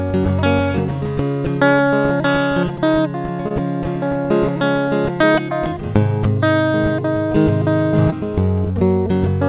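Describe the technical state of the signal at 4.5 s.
At 4.5 s the music is intact, with no fault audible, only the narrow band of the call codec, which carries nothing above 4 kHz, consistent with G.711 mu-law at 64 kbps.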